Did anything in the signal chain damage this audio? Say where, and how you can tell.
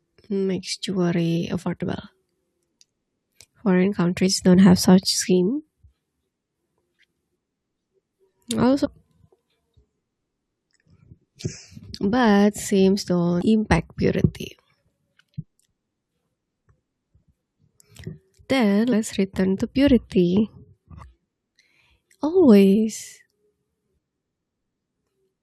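Yes. The damage is at the codec or storage stage: damaged data in a compressed stream. Brief glitches occur at 8.84 to 8.86 s, at 13.41 s just before "impact purity", and at 18.91 to 18.93 s just before "return to purity". Corrupt bytes made the decoder misread frames and lose sync until it found the next valid header. On the waveform each appears as an abrupt discontinuity.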